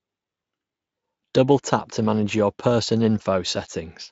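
No technical faults are audible.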